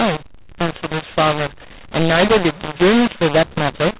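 A speech clip with a mu-law and A-law mix-up running through the whole of it. The audio was coded with A-law but decoded as mu-law. Because the two logarithmic scales don't match, levels are scrambled. Some samples come out too loud, others too quiet. The speech sounds harsh and distorted. The quietest samples are pushed well above silence, so pauses fill with noise. Nothing passes above 4 kHz, which fits ordinary 8 kHz telephone coding.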